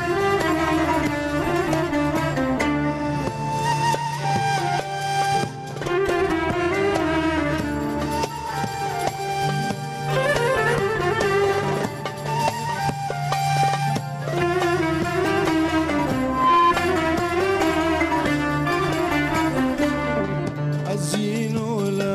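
The audio has a loudspeaker feedback squeal from 16.18 to 16.74 s. A 1 kHz tone swells over about a third of a second, peaking roughly 5 dB above the signal. A microphone is re-amplifying its own loudspeaker.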